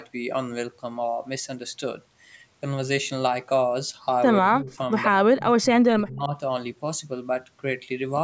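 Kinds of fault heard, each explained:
Speech suppressed in double talk: From 4.4 to 4.91 s and again from 5.08 to 6.33 s the speech sinks by as much as about 25 dB, likely an echo canceller ducking its own talker while the far end talks over it.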